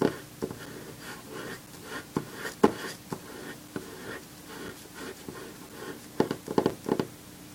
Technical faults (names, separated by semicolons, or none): gap between chunks